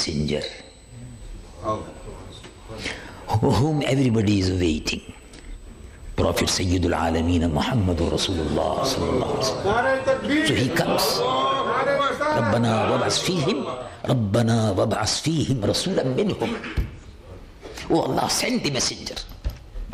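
USB whine runs from the start to 13.96 s, a steady tone fixed at 8 kHz sitting about 35 dB below the sound. It comes from the bus drawing current in 125-microsecond microframes, and that pulsing leaks into the audio through shared power or ground.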